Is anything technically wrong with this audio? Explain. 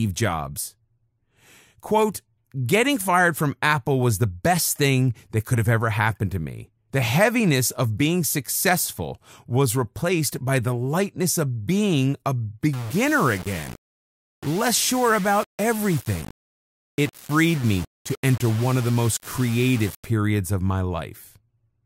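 Yes. From 12.73 to 20.05 s, after "lightness of being a" and before "of my", the speech turns grainy. This is likely low bit depth without dither: rounding to about 5 bits creates error that follows the signal, roughly 20 dB below it. The grit rises and falls with the speech, and anything quieter than one step drops out or sputters, whereas dithered truncation would leave a steady, even hiss.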